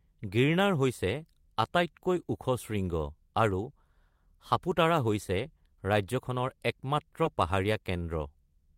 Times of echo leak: none

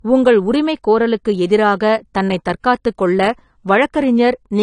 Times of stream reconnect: none

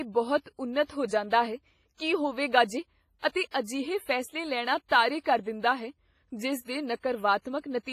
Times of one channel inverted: none

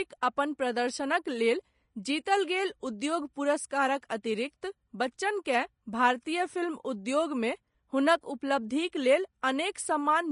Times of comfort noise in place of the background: none

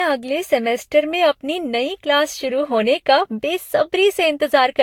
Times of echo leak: none

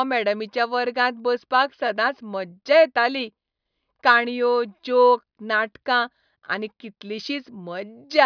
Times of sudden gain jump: none

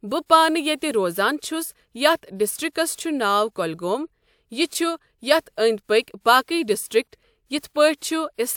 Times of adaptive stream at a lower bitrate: none

